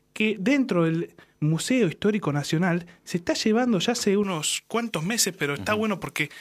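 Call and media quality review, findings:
Speech turns thin, bright, sibilant from 4.24 s to end. Pre-emphasis left on: treble boost, J.17 curve, about 11 dB up at 10 kHz, de-emphasis never applied.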